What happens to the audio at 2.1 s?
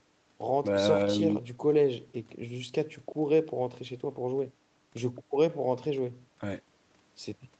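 Nothing goes wrong at 2.1 s: the speech passes through intact, with only the normal band limit of the call path, so there is nothing above 8 kHz.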